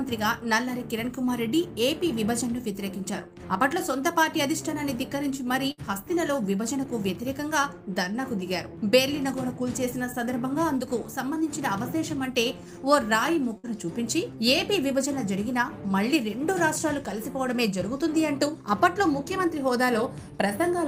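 At 5.71 s and again at 13.58 s there's a burst of packet loss. About 60 ms gets lost, the last sound is stretched and faded to fill the hole, and the audio then jumps ahead.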